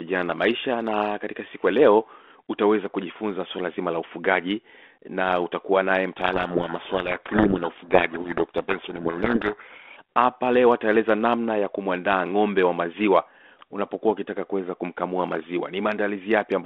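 From 6.18 to 9.97 s the two ends of the link disagree on the bit order of the G.726 code words, a codec payload misread. The decoder keeps accepting each code word as valid but reads its bits in the wrong order, so the adaptive prediction is driven by wrong differences and the speech sinks under harsh, grinding distortion. When the packing agrees again at 9.97 s, the 32 kbit/s G.726 telephone band, about 250 Hz to 3.5 kHz, returns with only light coding damage.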